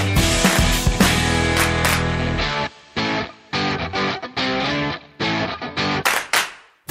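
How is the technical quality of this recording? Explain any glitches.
No glitches turn up anywhere in this recording. Nothing breaks into the sound at any point, so there is no fault to explain.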